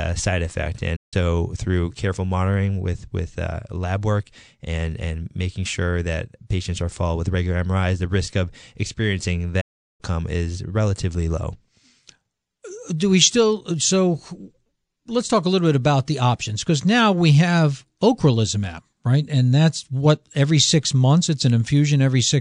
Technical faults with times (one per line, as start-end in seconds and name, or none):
0.96-1.14 playback stall
9.60-10.01 playback stall